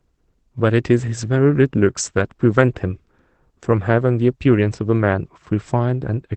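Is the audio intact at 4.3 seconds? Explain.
Yes, the audio at 4.3 seconds is intact, with nothing there beyond the ordinary coding noise and 8 kHz band limit of the Opus call path it passed through.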